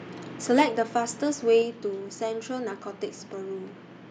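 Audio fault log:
0.58–0.62 s, microphone overload: peaks about 4 dB over the converter's limit, with roughly a tenth of samples flattened, likely from excessive input gain, give a harsh crackle.
0.62 s and 1.62 s, microphone volume stepped down: the level drops abruptly by about 3 dB, then about 4 dB more, likely automatic gain control reacting to the loud or clipped input.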